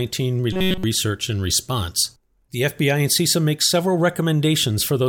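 Robotic sound from repeated short buffers runs from 0.53 to 0.84 s, just before "and response". The speech collapses into a rigid metallic buzz at 188 Hz, likely because audio arrived too late and a block of about 5.3 ms was replayed over and over in place of the missing sound.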